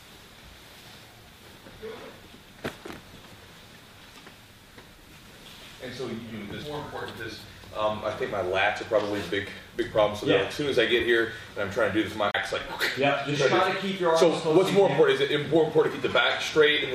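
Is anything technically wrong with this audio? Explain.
Yes. Two CD skips occur, at 6.63 s and from 12.31 to 12.34 s. The laser jumps tracks, so a tick and a brief mute (roughly 30 ms the second time) give way to sound from elsewhere, unlike a dropout, which resumes in place.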